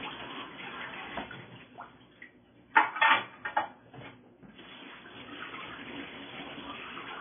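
All the way through, nothing comes through above 3.5 kHz, and what's left swirls and turns watery, likely MP3 compression starved of bits, roughly 16 kbps.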